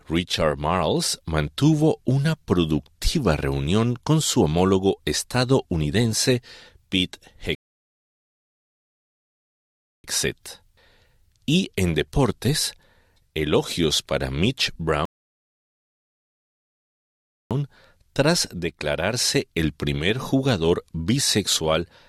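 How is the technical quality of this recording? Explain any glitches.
The recording has two rebuffering stalls. At 7.55 s the sound drops to silence for about 2.5 s, resuming at 10.04 s, and again from 15.05 s to 17.51 s. Each time playback exhausted its downloaded audio and paused, picking up exactly where it stopped, adding time without losing anything.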